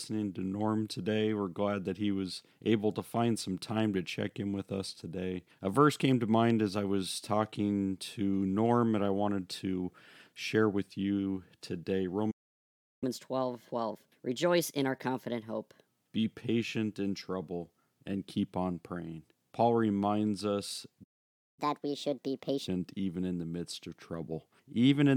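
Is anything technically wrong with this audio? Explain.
Yes. The speech twice stops dead and then rushes forward.

Playback stalls occur at 12.31 to 13.04 s and at 21.03 to 21.59 s, the second right after "reminds us". The sound cuts to silence for about 0.71 s and then about 0.54 s. The player likely ran dry of buffered data or had its output thread held up. Nothing reaches the output until it recovers.

Catch-up at higher speed follows each stall. From 13.04 to 15.88 s the speech runs at 1.25 times normal speed, pitched up about four semitones. It settles just before "be patient in trouble". From 21.59 to 22.68 s it runs at 1.5 times, up about seven semitones, and returns to normal before "even in the midst". The player is resampling its backlog to recover the lost time. Speed and pitch therefore rise together, and the voice sounds hurried and chipmunk-like.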